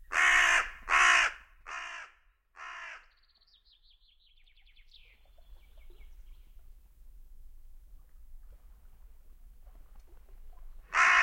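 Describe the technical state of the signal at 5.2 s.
Unsmoothed 1 dB gain steps, about ten a second from 4.35 to 5.63 s, cause zipper noise: each jump clicks, laying a ticking rasp over the sound.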